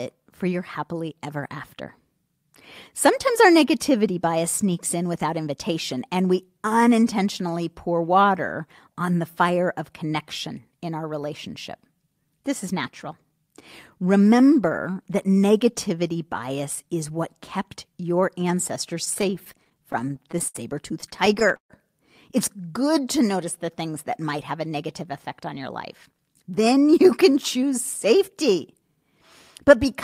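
At 11.24 s and again at 16.77 s, a repeated buffer occurs: a 1.33 ms slice, which fits a 64-sample buffer, plays one and then two extra times, producing tiny clicks. From 19.05 to 20.56 s and from 21.00 to 21.72 s, repeated stalls (stutter) drag the speech as the jitter buffer repeatedly runs dry and the last sound is stretched to bridge waits of up to 67 ms and 138 ms. From 22.56 to 22.91 s, a jitter buffer slow-down replays pitch periods, drawing the speech out to 88% speed at unchanged pitch. From 24.81 to 28.98 s, a jitter buffer speed-up trims pitch periods to shed excess delay, running the speech at 106% speed and removing about a fifth of a second.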